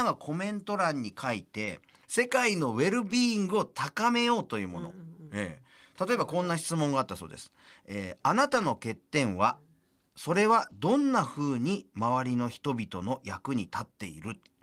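Brief rough, noisy patches break into the speech at 1.61 to 1.71 s, 3.11 to 3.17 s, 8.49 to 8.63 s and 10.61 to 10.71 s, with no silence at any of them. Each is a lost packet rebuilt from error correction. Audio packets went missing, but the packet after each loss carried a low-bitrate copy of it, and the decoder played that copy. The gap is filled, but at lower fidelity.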